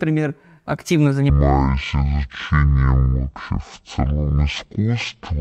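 From 1.3 s to the end of the clip, the two channels of a stereo stream are taken one after another as a single mono channel, a case of stereo read as mono. Each left and right pair is played as two successive samples, so the speech runs at half speed and drops a full octave, twelve semitones down. A fainter mirrored copy of the sound also shows up in the upper half of the spectrum.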